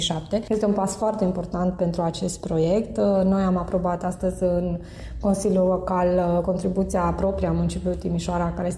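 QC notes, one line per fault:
No technical faults were found in the signal at any point in the clip.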